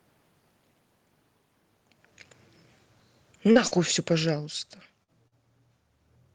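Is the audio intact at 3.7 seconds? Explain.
No. A short concealed packet loss sits at 3.67 to 3.74 s: about 40 ms of audio never reached the decoder in time, so the receiver filled the gap by extending the preceding sound and then blending back in, which is heard as a brief smear or wobble. Automatic gain falling runs from 3.36 to 5.51 s: the gain control judged the input too loud or its background noise too strong and eased its gain down by about 11 dB, so the speech and its background noise sink together through that stretch.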